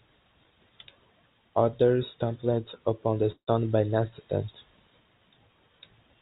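At 3.32 s the incoming audio stops arriving, most likely because of a long network dropout, and about 160 ms of speech is never played. The receiver carries the last sound forward for about 150 ms as a buzz or hiss that fades away, and about 90 ms of silence follows. The speech resumes at 3.49 s without the lost portion. The call runs through the G.711 path, so both the fill and the resumed speech stop at 4 kHz.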